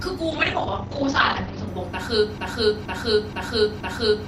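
From 0.31 s to 1.73 s the speech goes through a call bitrate drop. The encoder's rate falls from 48 kbps to 12 kbps and stays at the bottom for about 1.36 s. At that rate the codec quantises far more coarsely and narrows the audio band from 20 kHz to 8 kHz. The speech loses its top end and sounds muffled and watery until the rate comes back up.

At 2.38 s a broken-record loop starts and runs to the end of the clip. A 475 ms fragment plays four times back to back with no variation, so it has a mechanical, stuck rhythm. The repetition is likely caused by the player, encoder or stream stalling and re-sending the last chunk it held. Whatever should have followed in that stretch is missing.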